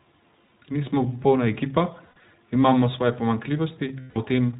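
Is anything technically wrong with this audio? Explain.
Yes. The speech sounds band-limited, slightly rough and synthetic throughout, with nothing above 4 kHz. This is iLBC codec damage, which fits 20 ms narrowband frames coded independently at about 15 kbps.

At 0.44 to 0.51 s, 2.06 to 2.23 s and 4.00 to 4.18 s, the speech turns into held, buzzy, breathy vowels. These are lost iLBC frames, 60 ms, 120 ms scattered over 160 ms, and 160 ms long. The decoder repeats the last pitch cycle mixed with noise, then recovers almost at once.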